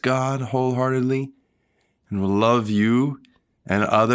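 A speech clip that has passed through call microphone processing, with nothing technically wrong with it.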